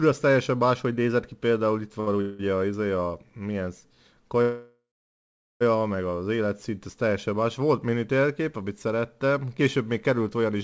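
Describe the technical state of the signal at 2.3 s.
At 2.3 s you're right in the middle of a call audio freeze, running from about 2.21 to 2.41 s. The last bit of sound gets stretched into a buzzy or hissy, fading fill for roughly 180 ms, then the audio picks up exactly where it left off, so nothing's lost but everything after arrives about 180 ms later. The likely cause is packets stalling in transit and the jitter buffer running dry, all on a G.722 call path with nothing above 8 kHz.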